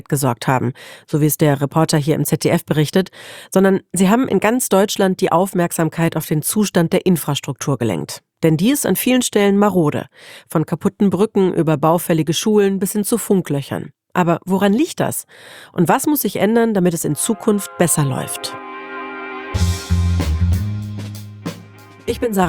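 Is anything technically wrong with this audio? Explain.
Yes. From 18.58 to 22.42 s, channel delay (comb filtering): one channel lags roughly 10 ms before mono summing, hollowing the sound with fixed notches from about 50 Hz, evenly spaced dark spectrogram bands.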